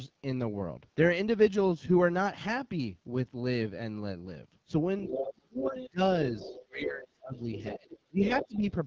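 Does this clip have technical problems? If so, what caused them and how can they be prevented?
Yes. AMR wideband (HD Voice) codec, throughout the whole clip: the speech sounds rough and raspy. The codec models the voice up to 6.4 kHz with a pulse-excited vocal tract filter and fills 6.4 to 7 kHz with shaped noise. Here it runs at 8.85 kbit/s, its second-lowest rate, where too few bits describe each pulse pattern, so the grain is plainly audible. Prevent it by negotiating a mode of 12.65 kbit/s or higher.

Other side's voice leaking through, at 4.99 to 5.34 s, 5.65 to 5.9 s, 6.35 to 6.65 s and 7.35 to 8.58 s: a second voice sits under the talker. It is strongest in the first stretch, only about 5 dB below the speech, weaker at about 15 dB below in the middle two, and about 10 dB below in the long final stretch. The likely cause is the far end playing from the talker's loudspeaker back into the microphone, with the echo canceller leaving a residue. 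A headset, or better echo cancellation tuning, prevents it.

Speech suppressed in double talk, from 5.06 to 6.0 s and from 6.31 to 8.62 s: the talker's level dips and breaks up while the leaked voice is present. It falls by roughly 30 dB at worst in the first span, affecting about half a second, and by roughly 25 dB in the second, affecting about one and a half seconds in total. The likely cause is the echo suppressor, unable to tell near speech from echo, attenuating both. A headset, which removes the echo, prevents this.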